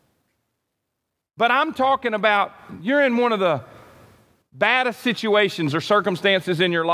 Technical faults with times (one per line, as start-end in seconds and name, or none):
none